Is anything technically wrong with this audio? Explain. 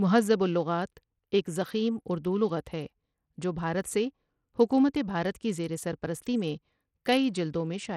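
Yes. Throughout the speech there is plainly audible codec damage that sounds like Bluetooth SBC compression, likely at a low bit pool, roughly what an 80 kbps stream would give. With so few bits shared across its wide sub-bands, the upper bands are starved and the rest coarsely quantised, so the treble thins and flickers while a gritty, aliased haze clings to the voice. On a spectrogram, the high frequencies appear patchy and blocky, switching on and off, with grainy noise smeared across the bands below.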